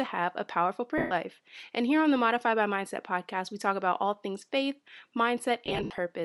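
Throughout the speech there is a plainly audible breathy, grainy edge on the upper frequencies, with the top of the spectrum sounding hissy rather than detailed. This is likely Bluetooth LC3 compression: the LE Audio transform codec has discarded much of the high band and filled it with noise. The amount of damage fits a bitrate around 48 kbps with 10 ms frames.

Right after "have a powerful", from 0.98 to 1.11 s, the sound smears into a noisy, pitchless wash for 130 ms before it resumes. These are lost LE Audio frames. With no data arriving, the decoder repeated the last spectrum with scrambled phase, which destroys the tonal detail and fades the level after the first few frames.

A second patch of lost LE Audio frames runs from 5.66 to 5.98 s. There, 200 ms of dropouts are scattered over 320 ms, and the longest gap is about 70 ms. It sounds like a stuttering, noisy breakup rather than one smear, because the concealment switches on and off repeatedly.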